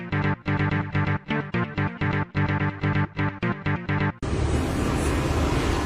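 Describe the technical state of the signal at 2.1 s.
At 2.1 s the signal is intact, with no audible technical fault at that moment.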